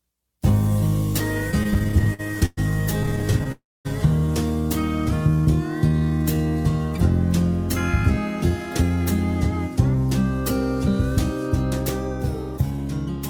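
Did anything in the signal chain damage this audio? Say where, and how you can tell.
Yes. The network and receiver jitter buffer caused all of it.

Repeated stalls (stutter) run from 1.51 to 2.59 s and again from 3.03 to 3.52 s. The first run has 16 gaps, the longest 116 ms, and about 30% of that span is filled-in sound. The second has 10 short gaps of up to 19 ms. Packets arrived late, so the buffer kept emptying. The receiver stretched the last sound each time. The audio drags, but nothing is lost.

A call audio freeze follows straight on, from 3.52 to 3.87 s. The last sound is carried on briefly, then about 240 ms of silence. Playback resumes where it stopped, so a 328 ms gap has been inserted. A held-up burst of packets that drained the buffer is the likely cause.

A jitter buffer slow-down runs from 5.89 to 6.39 s. The pitch stays put but the sound drags, playing at 79% speed. About 115 ms was added. 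The buffer was building a reserve. It did this by repeating single pitch periods or slices of pauses over and over. That leaves sounds drawn out.

Jitter buffer speed-up appears twice, 8.50 to 9.06 s and 12.70 to 13.18 s. Playback runs at 108% and 109% speed at unchanged pitch. Roughly 50 ms is trimmed each time, and the sound feels hurried. The buffer held more than its target, as happens when delayed packets land together. It cut short pieces of one or a few pitch periods to bring the delay back down.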